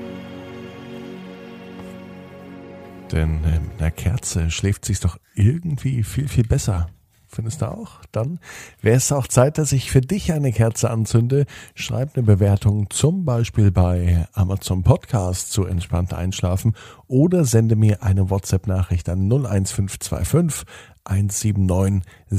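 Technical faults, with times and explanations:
Nothing stood out on listening to this audio.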